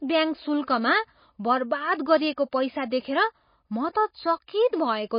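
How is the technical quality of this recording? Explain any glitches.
The technical quality is poor. Throughout the speech there is audible damage from MP3 compression.

The whole clip sounds dull and watery. Nothing is present above about 5.1 kHz, so s sounds lose their edge and take on a swirly, metallic chirp, and consonant onsets smear. The likely cause is heavy MP3 encoding at a very low rate, which fits a 24 kbps stream. Starved of bits, the encoder chops the treble at a fixed cut-off and drops weaker frequency components. Those components flicker on and off from frame to frame, which produces the bubbling texture.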